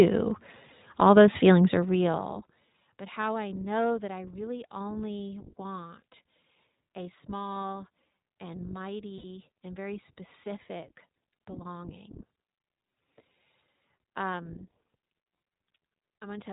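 Speech that sounds narrow and muffled, with nothing above 4 kHz and a plainly audible rough, slightly synthetic edge throughout, carries the marks of the iLBC codec. This narrowband VoIP coder encodes each frame's excitation independently, and the texture points to 20 ms frames at roughly 15 kbps. From 9.18 to 9.24 s the sound briefly turns into a held, faintly buzzy tone before snapping back. These are lost iLBC frames. The decoder filled the 60 ms gap, which fits three missing 20 ms frames, by repeating the last pitch cycle blended with noise, and the signal recovers immediately because each frame decodes on its own.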